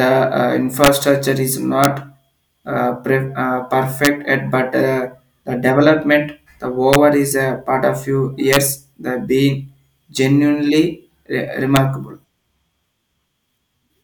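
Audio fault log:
0.84–0.88, 1.84, 4.05–4.07, 6.93–6.95, 8.53–8.56 and 11.76 s: integer overflow. Loud speech peaks pushed sample values past the integer limit, by at most about 3 dB, and they wrapped to the opposite sign instead of being limited. This produces violent cracks far harsher than clipping, one just before "yet but uh the", another just after "a part of few".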